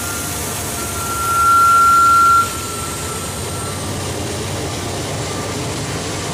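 From 0.74 s to 2.55 s a loudspeaker feedback squeal rises out of the audio: a single steady tone at 1.4 kHz that swells over roughly 0.7 s to around 10 dB above the surrounding sound. A microphone was picking up the loudspeaker it fed, and at that frequency the loop gain passed one, so the tone fed itself. On a spectrogram it is one bright horizontal line at 1.4 kHz; the waveform's envelope grows into a dense, even band, then stops.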